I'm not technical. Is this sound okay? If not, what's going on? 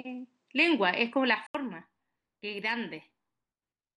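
No. An input switched to a poorer device is the likely cause of what you hear from the start to about 1.55 s. The sound is duller, with nothing above 9.3 kHz, and has faint background noise. A brief gap of about 80 ms comes before it clears and shifts in loudness.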